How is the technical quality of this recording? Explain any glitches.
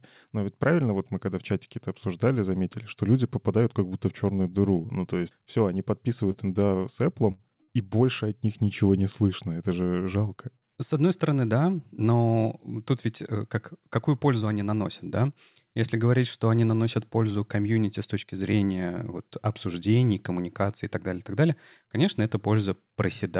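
The recording has four dropouts of the kind a live call produces, all between 6 and 8 seconds. The sound is narrowband, with nothing above 4 kHz, which fits a G.711 call codec.

Short concealed packet loss occurs at 6.32–6.36 s, just after "то есть все они", and again at 6.66–6.70 s. About 20 ms never arrived each time. The receiver extended the preceding sound, leaving a brief smear.

A burst of packet loss occurs at 7.32–7.41 s and at 7.63–7.70 s, shortly before "и больше от них". Each time about 60 ms went missing. The fill fades as a held buzz or hiss, then the sound jumps ahead.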